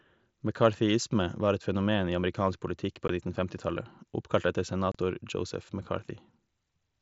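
At 3.08 s the speech drops out for 15 ms. A longer hole runs from 4.92 to 4.95 s, lasting 30 ms. Both are unconcealed Bluetooth headset packet loss. Packets between headset and phone went missing. Silence or an idle pattern filled each gap, leaving abrupt edges.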